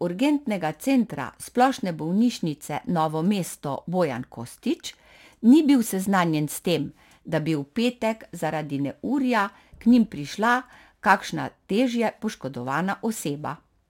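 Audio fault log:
Throughout: crude rate conversion. The speech carries a gritty, inharmonic fizz that rides on louder and brighter moments, consistent with a rate change from 44.1 kHz to 48 kHz done by simply repeating the nearest sample instead of filtering. Each repeated sample leaves a small step, and because the two rates line up in a fixed cycle, those steps form shifted, inharmonic copies of the voice, sitting roughly 30 dB below it.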